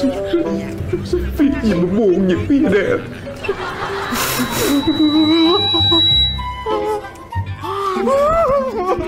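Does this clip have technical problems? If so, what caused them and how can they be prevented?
Yes, there's a loudspeaker feedback squeal running from about 4.03 s to 6.54 s. A steady tone near 3.9 kHz creeps in and swells over roughly two seconds until it sits about 5 dB above the rest of the sound. That's the mic hearing its own loudspeaker: at 3.9 kHz the loop gain tipped past one, so that frequency kept feeding itself and growing. To prevent it, drop the gain, move the mic out of the speaker's throw, or notch out 3.9 kHz.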